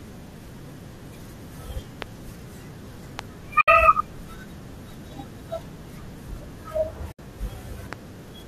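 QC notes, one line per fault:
2.02–2.04, 3.19–3.21 and 7.93–7.95 s, loud pop. Three single sharp pops rise well above the speech, which carries on underneath. A voltage pulse, likely from a plug, switch or static, is the cause.
3.61–3.68 and 7.12–7.19 s, AAC frame loss with muting. Two 70 ms soft-edged gaps. Zeroed frames fade out and back in, which fits seven lost 10 ms low-delay AAC frames.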